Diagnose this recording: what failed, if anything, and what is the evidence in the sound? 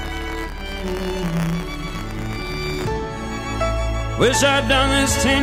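Buffer tearing at the driver or buffer stage. From 0.0 to 2.88 s a robotic rattle at 100 Hz rides on the sound, fitting a 10 ms period. Writer and hardware reader have slipped. A small slice of each period replays audio from about 20 ms earlier, with hard joins.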